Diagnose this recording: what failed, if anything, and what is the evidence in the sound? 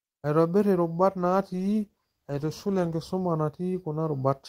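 Call bitrate drop at the codec stage: from 1.18 to 3.01 s the speech turns rough and muffled, which fits the encoder falling from 32 to 15 kbps and losing its top end.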